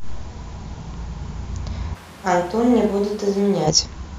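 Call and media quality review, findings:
Speech turns suddenly roomy and hollow at 1.96 s. Bass thins, level drops about 10 dB, room noise rises to around 25 dB below the voice. Returns abruptly at 3.65 s. Cause: likely a switch to a distant microphone, with close-mic signal dropped and a far pickup, such as a camera mic, filling in. Distance adds room reflections and loses proximity bass.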